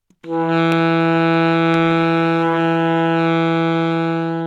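A sharp loud pop at 0.72–0.74 s, then a double pop at 1.74–1.93 s, each standing about 10 dB above the sound carrying on beneath; likely a voltage spike from a switch, plug or static discharge.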